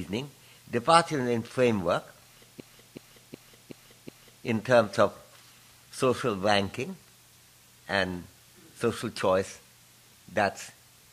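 At 2.60 s a system hang loop begins and runs until 4.46 s. The computer or its audio driver stalled, while the sound hardware kept replaying the same ring buffer. One 0.37 s slice of sound repeats exactly, five times over. That fits a 16384-sample buffer. The repeats arrive at about 2.7 per second, so it sounds like a skipping record. When it ends, the sound picks up with essentially nothing missing.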